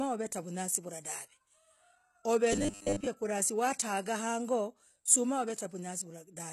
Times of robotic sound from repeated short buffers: 2.53-3.07

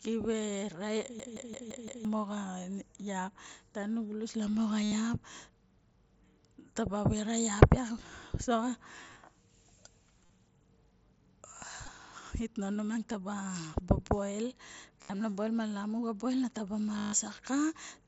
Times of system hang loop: 1.19-2.05

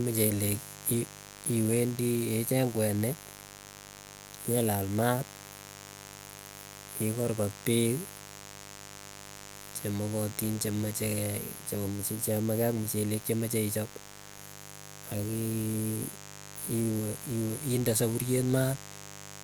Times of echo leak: none

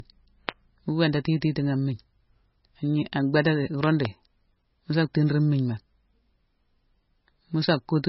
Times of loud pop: 0.49-0.51, 3.83-4.07

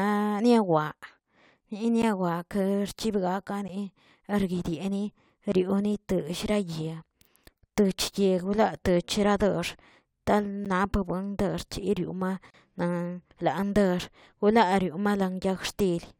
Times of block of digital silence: 2.02, 3.68, 5.52, 10.65, 12.50-12.54

